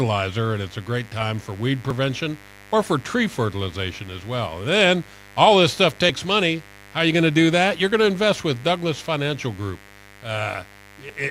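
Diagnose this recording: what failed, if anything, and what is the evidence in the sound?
Analogue wiring fault: a raspy mains buzz sits under the speech throughout, roughly 25 dB down, from switching spikes stacking up 50 Hz harmonics.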